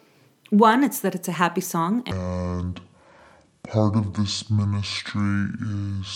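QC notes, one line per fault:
2.11 to 6.16 s, section at the wrong speed: from 2.11 s to the end the speech plays at 0.571 times its recorded speed, so it drags and drops about ten semitones in pitch, likely from playback fitted to the wrong clock rate.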